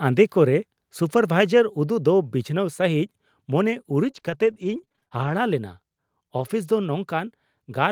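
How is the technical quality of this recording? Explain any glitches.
The recording has two network-related glitches, both in the second half of the speech.

From 4.03 to 5.32 s there is repeated packet loss (robotic sound). Packets kept failing to arrive in time, leaving many short holes, the longest about 30 ms. The decoder bridged most of them by stretching the preceding sound, about 223 ms in all, though roughly 260 ms of the original is still missing. With nearly a fifth of that stretch concealed, the speech turns choppy and takes on a mechanical, robotic edge.

From 6.38 to 6.44 s comes a lost packet rebuilt from error correction. Two separate packets were lost. The packets that followed carried low-bitrate backup copies of the missing audio, and the decoder played those instead of leaving a gap. There is no dropout, but those 40 ms sound rougher and noisier than the audio around them, a brief grainy blemish.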